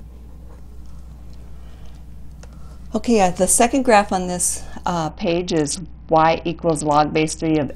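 From about 5.09 s to 7.68 s you can hear a Bluetooth SBC bit pool drop. The link got congested, so the phone cut the encoder's bit budget hard to keep the stream alive. That sounds like a fall from a bit pool around 31 down to something near 7, roughly 61 kbps. The top sub-bands get almost nothing, so the treble goes dull, and the coarse quantisation in the remaining bands adds a gritty grain until the rate comes back.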